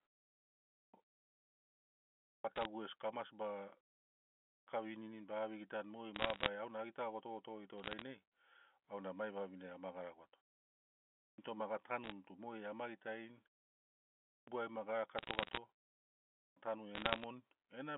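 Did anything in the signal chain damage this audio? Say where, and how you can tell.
Yes. Clipped start after a pause, at the playback stage: onsets at 0.56, 2.1, 4.3, 11.04 (before "toma ga"), 14.1 and 16.2 s lose about 0.34 to 0.38 s each. The output device sleeps during silence and wakes late.

Bit errors on a digital phone line, on the G.711 link: sharp ticks and crackle at 2.56, 6.15, 7.78, 12.04, 15.18 and 16.95 s. Flipped bits in the 8-bit codes each corrupt one sample.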